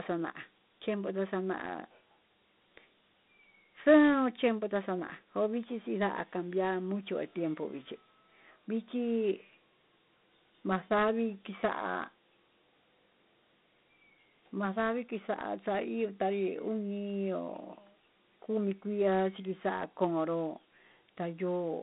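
From start to end the speech is narrow and boxy, with a gritty hiss that tracks it and nothing above 3.9 kHz. This is Dialogic VOX ADPCM: coarse 4-bit step coding, roughly 32 kbps, over a 200 Hz to 3.7 kHz telephone band, leaving plainly audible quantisation grain.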